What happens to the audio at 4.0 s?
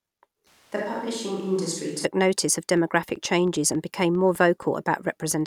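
At 4.0 s the speech sits inside a train of clicks running from 2.77 to 5.33 s, just after "notice of": about fifteen irregular pops near signal level, likely from electrical interference.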